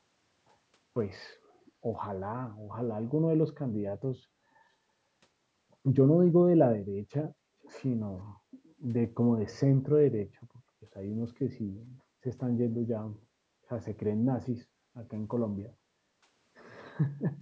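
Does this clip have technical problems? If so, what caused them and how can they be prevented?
Yes. From 7.62 to 7.71 s an echo leak returns a faint, brief copy of the speech, roughly 30 dB down, arriving about 469 ms late, which is likely a far-end loudspeaker and an echo canceller that missed it. Unlike room reverb, it is a distinct delayed repeat rather than a smeared tail. Using headphones at the far end or a better-tuned echo canceller would prevent it.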